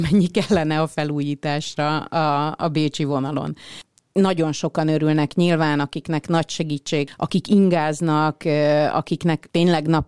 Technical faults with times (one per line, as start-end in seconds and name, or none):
none